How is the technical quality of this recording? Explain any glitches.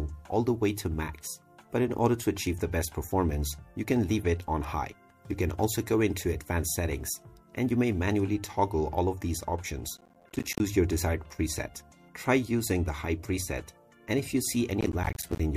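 Two bursts of processor overload crackle affect the recording, from 9.97 to 10.6 s and from 14.81 to 15.4 s. The processor repeatedly missed its buffer deadlines, and each missed block became a brief hard-edged silence, which fits buffers of around 10 ms. The result is a gritty tearing crackle over the sound until the load eased.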